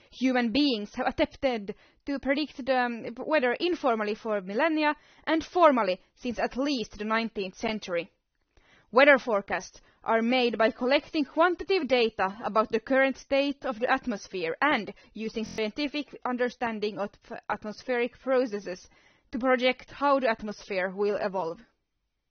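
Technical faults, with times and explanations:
Throughout, AAC compression: the audio stops dead at 6.3 kHz, leaving it dull, and the coding damage is plainly audible, which fits low-bitrate AAC-LC at around 24 kbps. The likely cause is encoding, not a simple filter, because the smearing comes along with the band limit.
15.46–15.58 s, system hang loop: one 23.22 ms slice of sound repeats exactly five times, giving a brief buzz at 43.1 Hz, which fits a 1024-sample buffer cycling while the system froze. Unlike a dropout, it repeats sound instead of going silent, and about a tenth of a second is lost.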